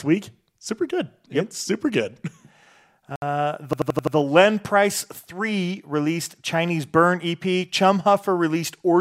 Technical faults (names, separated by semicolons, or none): Bluetooth stall; system hang loop